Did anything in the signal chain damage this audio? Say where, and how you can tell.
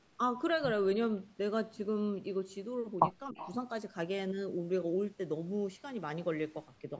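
Yes. Speech suppressed in double talk, likely from the echo canceller, dips the speech by about 10 dB from 3.31 to 3.38 s. Unlike a network dropout, the audio ducks instead of going silent.

An echo leak, again likely in call processing, sends back a faint copy about 20 dB down, delayed by 297 ms, from 3.37 to 3.55 s. Its fixed delay rules out room reverberation.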